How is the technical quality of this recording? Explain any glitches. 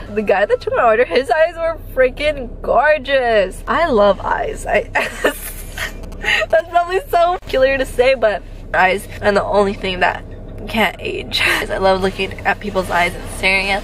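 Two glitches stand out, both in the middle of the clip.

From 5.89 to 6.61 s there are GSM signalling bursts: a nearby 2G phone's radio pulses get rectified by the circuitry, giving a galloping dit-dit-dit of short buzzes at 217 Hz, well below the main sound.

Then at 7.39 to 7.42 s there's a gap at a join of encoded pieces: a 34 ms gap, its edges smeared by the codec, where separately encoded chunks were butted together untrimmed. The sound then picks up exactly where it left off.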